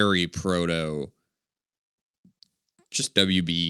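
Clock drift between sender and receiver runs through the whole clip: the sender's audio clock is about 3% slower than the receiver's, so the jitter buffer keeps draining and the receiver has to fill the gaps. Unlike ordinary network jitter, which causes random, isolated glitches, drift produces a steady pull in one direction, so the same kind of small hiccup keeps coming back at uneven intervals instead of appearing as one burst.

Repeated timing corrections follow from that drift between 0.06 s and 3.62 s. Because the sender is slow, the receiver repeatedly duplicates short pieces of the speech, adding roughly a tenth of a second overall and leaving playback at about 97% speed. These repeats are heard as faint stutters and a slightly dragging, unsteady tempo. They are not the clean jumps of dropped packets, and they are not a uniform slowdown with lowered pitch.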